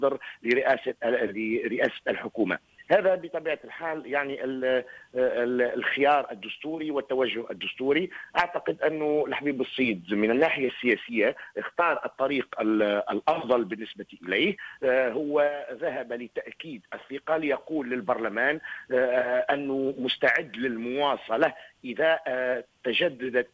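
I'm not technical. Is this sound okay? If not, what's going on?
Yes, it's fine: it came through a normal call connection, which trims off the very highest sparkle above about 8 kHz, as phone-style calls do, and nothing in it sounds wrong.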